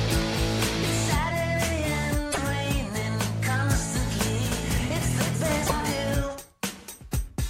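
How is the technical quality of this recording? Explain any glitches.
The recording has two glitches.

At 2.31 to 2.38 s there is a broken MP3 bit reservoir. The audio skips forward and the sound is disrupted for about 70 ms, roughly three frames of 26.1 ms. The likely cause is frames dropped from the stream. The next frames then reach back for borrowed data and decode bytes from the wrong frame. On a spectrogram this shows as a short disruption with a hard edge where the signal jumps.

From 4.52 to 5.90 s there is a doubled audio track. A second, full-band copy of the sound runs about 300 ms behind the original and about 5 dB quieter. It gives a flat, slapback-like echo with no decay or room colour. The likely cause is the same signal being captured again through a slower path, or two misaligned copies left in an edit. The echo begins and ends abruptly. In the waveform, each transient has a smaller twin about 300 ms later, and on a spectrogram the same patterns repeat, shifted in time.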